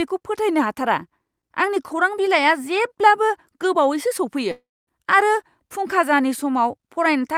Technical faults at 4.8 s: long network dropout

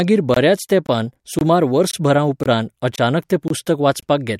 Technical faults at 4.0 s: gap between chunks

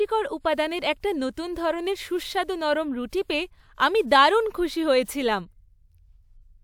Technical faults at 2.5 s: none

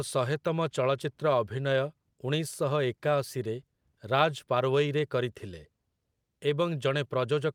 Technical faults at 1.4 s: none

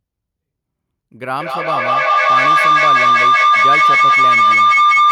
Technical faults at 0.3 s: none

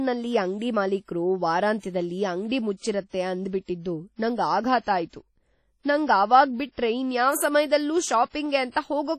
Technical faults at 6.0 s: WMA compression

